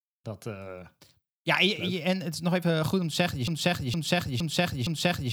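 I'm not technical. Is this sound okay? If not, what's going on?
No, not quite. Right after "om te zeggen je", at about 3.48 s, the speech gets stuck in a broken-record loop: a short snippet of just under half a second plays again and again, four times back to back, until the clip ends at 5.33 s. Whatever was meant to come next never arrives. That's most likely the player or stream stalling and repeating the last bit it had on hand instead of moving on.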